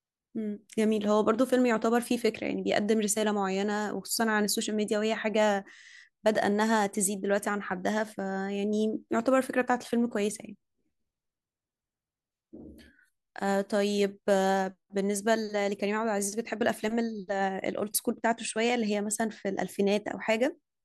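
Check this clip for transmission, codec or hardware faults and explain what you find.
Nothing faulty can be heard anywhere in this speech recording.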